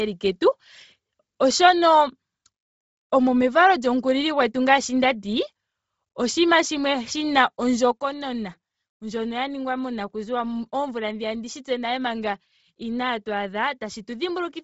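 Throughout, the speech likely went through low-bitrate Bluetooth LC3 compression: nothing remains above 7.7 kHz, and noise-filled upper bands give a heavily grainy, breathy edge. At 7.92 s, a sudden gain jump: likely an unramped digital gain change cuts speech and background together by about 7 dB, staying lower to the end.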